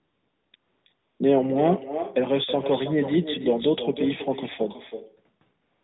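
Right from the start there's AMR comfort noise. From 0 to 0.54 s, then 0.56 to 0.86 s and 0.94 to 1.2 s, the phone decided nobody was talking and stopped sending speech frames. The far end filled those gaps with synthetic hiss built from a rough sketch of the background. You hear a smooth, even noise bed switching in and out in short blocks, and it comes back for the tail from 5.62 s to the end.

All the way through there's also echo with no canceller. The speech returns about 10 dB quieter, trailing the original by roughly 0.3 s. Someone's loudspeaker is feeding their microphone, and nothing is stripping it out, so every phrase gets a thin shadow chasing it. That sits on top of the narrowband AMR-NB sound, whose mild coding fits its 12.2 kbps mode.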